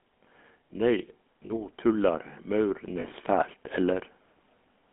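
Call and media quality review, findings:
Buzzy, gravelly roughness on the speech throughout, no content above 3.4 kHz and thin low end below 200 Hz. GSM full-rate codec, damage plainly audible. Pulse-excited vocal-tract model with decimated excitation, consistent with 13 kbps full rate.

Speech and background swell together, about 4 dB louder, 0.74 to 4.1 s. Automatic gain rising. AGC judged input too quiet and ramped gain slowly, lifting noise floor along with the speech.

Brief metallic, held ring at 1.46 to 1.52 s and 3.00 to 3.05 s. Lost GSM frames, roughly 40 ms each, fits two 20 ms frames. Decoder repeated last good frame parameters instead of new sound.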